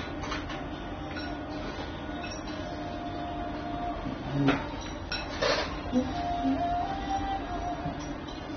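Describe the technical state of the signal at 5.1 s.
AAC compression damage is present at 5.1 s, as it is across the whole clip. The sound is dull and smeared, with nothing above 6.3 kHz and a warbling, fizzy texture on sustained parts, which likely comes from AAC-LC encoding at a low bitrate, in the region of 24 kbps. Starved of bits, the encoder drops the top of the spectrum, coarsely quantises what remains and leaves gaps or noise-filled bands, so the damage is plainly audible.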